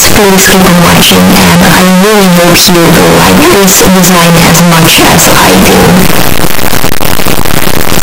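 From start to finish, the 8-bit samples were likely read with signed and unsigned mixed up, flipping the top bit so every zero crossing leaps across the full range. The result is a very loud, harsh distortion throughout, with quiet passages as loud as everything else.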